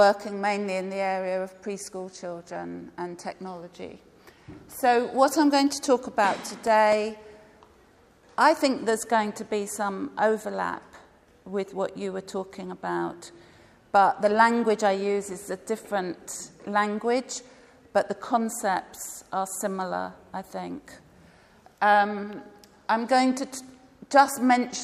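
From 6.67 s to 8.19 s there is a short run of seven regular ticks, about four or five a second, each a tiny click or near-dropout lasting no more than a few milliseconds. These are CD scratch ticks. A scratch or blemish on the disc wipes out more data than the error correction can rebuild, once per revolution. The player then interpolates or mutes those samples, leaving a brief gap that repeats in time with the disc's rotation.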